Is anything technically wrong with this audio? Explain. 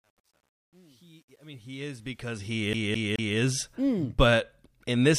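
Yes, there are two faults in this speech clip.

From 0.0 to 3.75 s, the fade-in from near silence sounds gritty, worst from 0.0 to about 2.08 s. This is truncation distortion on a fade: the level stage appears to keep about 10 bits without dither, so quiet passages collapse into coarse square steps.

From 2.73 to 3.37 s, just before "mm but", a 213 ms fragment repeats three times in a fast, even stutter with a brief mute at each jump. This is a CD stuck on one turn, where a scratch keeps throwing the laser back one track.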